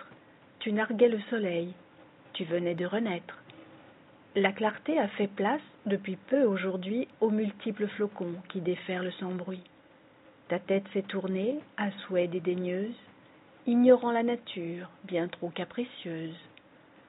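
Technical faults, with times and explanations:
Nothing stood out as a technical problem on listening.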